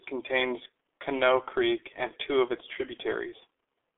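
G.723.1 codec damage runs throughout this speech clip: nothing survives above about 3.6 kHz, and the 300 Hz to 3.4 kHz telephone band sounds muffled and hoarse, with smeared consonants, because 30 ms frames and a slowly updated voice model, fitting roughly 6 kbit/s, discard detail.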